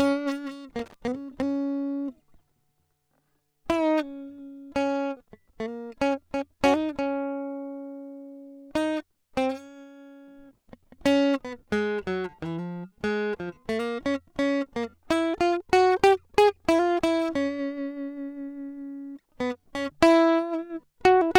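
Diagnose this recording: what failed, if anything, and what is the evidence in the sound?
Something in the analogue wiring let go briefly: there's a loose connector crackle from about 0.79 to 0.94 s into the music. A worn or dirty contact was making and breaking as it shifted, chopping the signal into that short, irregular burst of scratchy crackle.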